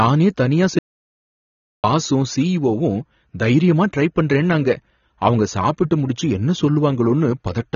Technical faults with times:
0.00-7.76 AAC compression
0.79-1.84 audio dropout to silence

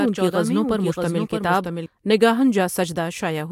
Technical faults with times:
0.00-1.86 doubled audio track

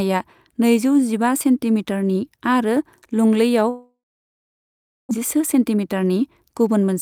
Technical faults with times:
3.69-5.13 long network dropout
5.21-6.96 jitter buffer speed-up

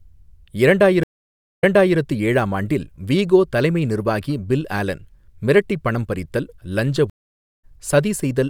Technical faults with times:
1.03-1.98 stream reconnect
7.10-7.65 stream reconnect

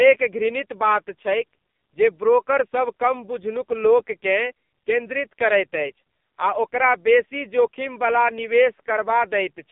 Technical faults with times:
0.00-9.71 AMR narrowband mobile codec

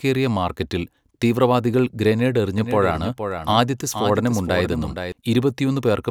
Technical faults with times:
2.58-5.12 doubled audio track

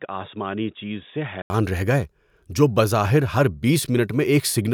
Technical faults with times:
0.00-1.50 input switched to a poorer device

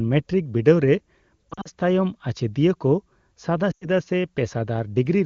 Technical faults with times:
1.50-1.68 lost AMR speech frames
3.71-3.87 lost AMR speech frames

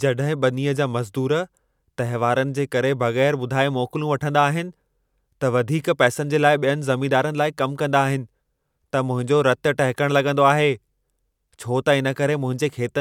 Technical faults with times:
none

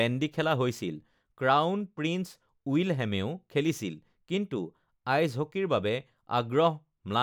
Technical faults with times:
none

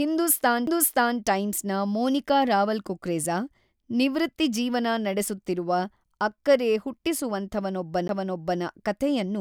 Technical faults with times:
0.66 CD skip
8.08 CD skip

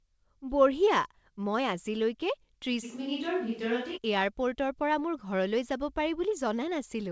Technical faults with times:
2.85-3.96 switch to a distant microphone

